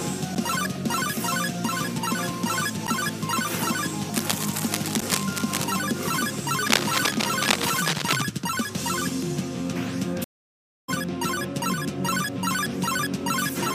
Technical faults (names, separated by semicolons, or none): block of digital silence; cable scratch noise; stream reconnect